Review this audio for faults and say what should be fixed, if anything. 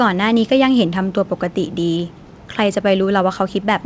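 Nothing stood out on listening to this speech, so there is nothing here that needs fixing.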